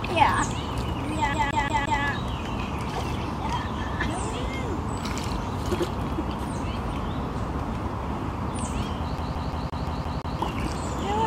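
From 1.34 to 2.03 s a short fragment of about 173 ms plays four times in a fast, even stutter with a brief mute at each jump, then again from 9.18 to 10.39 s for seven repeats. This is a CD stuck on one turn: a scratch keeps sending the laser back one track at the same spot.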